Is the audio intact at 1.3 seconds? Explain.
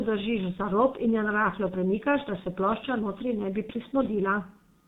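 No. At 1.3 seconds, as throughout, the G.723.1 codec passes nothing above 4 kHz, and its coarse 30 ms frames and slowly updated voice model, at a rate near 6 kbit/s, leave the speech muffled and hoarse with smeared consonants.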